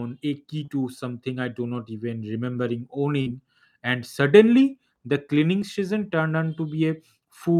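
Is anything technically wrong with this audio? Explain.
Yes. The speech has three packet-loss faults of two kinds.

Short concealed packet loss occurs at 0.65 to 0.68 s and again at 5.59 to 5.62 s. Each time, about 20 ms of the stream arrived too late for the decoder. The receiver invented a stand-in lasting 21 ms and 24 ms, respectively. It extended the preceding sound, then blended back into the real signal. The result is a brief smear or wobble in the speech.

A burst of packet loss hits at 3.21 to 3.27 s. About 50 ms of audio went missing in a row. The receiver stretched the last sound for 45 ms and lowered its level as the gap continued. This gives a short held buzz or fading hiss. The speech then picks up past the hole, and the lost stretch is simply gone.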